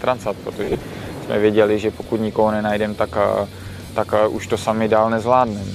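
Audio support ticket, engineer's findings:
Lost LE Audio frames, 0.64 to 0.78 s: about 90 ms of dropouts spread over 140 ms, longest run around 40 ms, consistent with nine 10 ms LC3 frames. Again at 3.86 to 3.89 s, 30 ms. The decoder repeats the last spectrum with random signs, so tones smear into noise. Spectrogram: tonal lines blur into broadband haze. Waveform: a noisy patch whose envelope sags across the longer run. Light lossy-compression softening sits underneath throughout.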